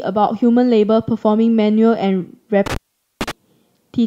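From 2.66 to 3.31 s the speech crackles and cuts out for 0.45 s, leaving faint hiss: an intermittent contact, a loose connection briefly opening.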